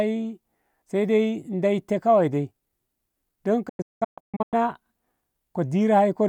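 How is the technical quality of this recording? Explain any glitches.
The recording has one noticeable glitch. From 3.69 to 4.54 s the speech drops into several short silent holes, each fading out in about 8 ms, with the longest gap lasting 192 ms. This is a digital broadcast dropout: the receiver muted corrupted or missing frames, losing about 0.67 s of the programme.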